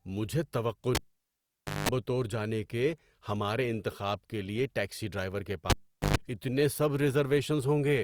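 At 0.95 s a live cable is pulled and plugged in again. The signal path breaks with a pop, the speech drops to near silence for about 890 ms, and a 50 Hz mains buzz lasting about 190 ms sounds while only the plug tip makes contact. A second pop marks the return at 1.89 s. The same fault recurs at 5.70 s, with a shorter gap of about 420 ms and a buzz of about 120 ms, ending at 6.17 s.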